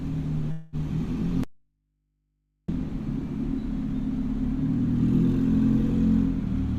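A recording of everyday sounds, with two faults in its first three seconds. From 0.51 to 0.76 s there is a call audio freeze: the sound stalls and the last moment is smeared into a buzzy continuation that fades, adding about 213 ms of filler while nothing is lost, so everything after arrives that much later. The likely cause is packets held up in transit and a jitter buffer that ran dry. On a spectrogram this shows as flat horizontal streaks with no new onsets. Then, from 1.44 to 2.68 s, an audio dropout to a faint residue cuts the sound off abruptly for about 1.25 s, leaving only mains hum roughly 50 dB below the signal until the sound snaps back in mid-flow. The likely cause is the wanted signal being lost while the downstream path stayed live. The waveform collapses to a near-flat line with hard edges at both ends, and the spectrogram shows empty space except for thin low-frequency hum lines.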